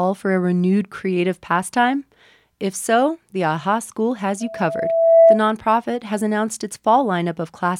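At 4.40 s a loudspeaker feedback squeal starts: one tone near 661 Hz swells over under a second to about 10 dB above the speech, ending at 5.44 s. The microphone was re-amplifying its own loudspeaker. Unlike steady hum, the tone grows by itself.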